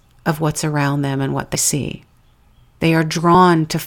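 At 1.55 s the speech lurches forward, and a smaller jump of the same kind follows at 3.34 s. Both are compressed frames skipped: whole blocks of the encoded stream were missing or rejected by the decoder, so playback leapt ahead. The first gap loses roughly a tenth of a second, which fits about three 32 ms frames. The second loses around one frame.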